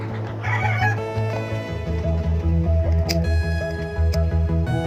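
Late-arriving packets repeatedly drained the jitter buffer between 2.13 and 3.30 s, causing repeated stalls (stutter): about a dozen brief 12 ms holds that make the audio drag without losing any content.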